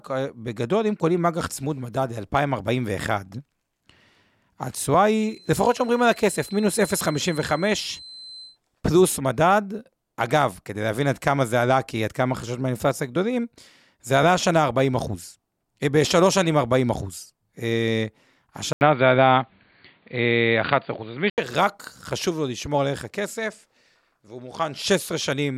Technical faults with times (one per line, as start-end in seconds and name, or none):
5.12-8.59 feedback whistle
18.73-21.38 input switched to a poorer device